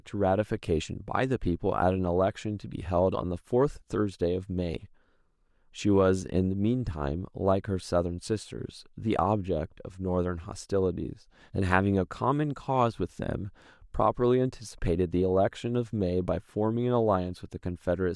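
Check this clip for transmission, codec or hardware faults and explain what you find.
No transmission, codec or hardware faults can be heard here.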